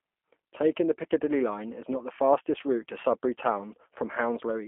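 Speech throughout has the sound of the G.729 codec, the G.729A form. The damage is plainly audible. Speech is rebuilt from a vocal tract filter, a pitch predictor and a few pulses per short frame. The result is intelligible but rough and slightly synthetic, which fits an 8 kbit/s stream. The line band runs from about 250 Hz to 3.4 kHz. Nothing is heard above 3.5 kHz, so sibilants are dull and thin.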